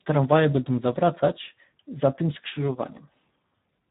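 Speech, carried through the Speex codec for its whole length. The CELP coder has too few bits for the excitation. The voice turns hoarse and noisy, which fits a low setting near 8 kbps. Nothing sounds above 3.8 kHz, so the top is dull.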